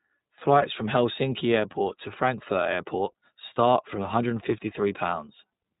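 Speech that sounds thin, slightly rough and synthetic throughout, with nothing above 3.8 kHz. This points to the iLBC codec, which codes each frame independently, likely in 30 ms frames.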